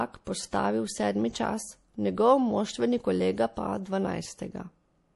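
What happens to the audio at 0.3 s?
At 0.3 s the speech sounds watery and swirly, with a dull top end, because nothing comes through above 11.5 kHz. This is present throughout the clip, not just at that moment. The cause is likely MP3 compression at a low bitrate, around 48 kbps by the sound of it. The encoder cuts the treble at a fixed point. With too few bits, it also drops weak frequency lines that flicker on and off between frames, which produces the plainly audible swirling.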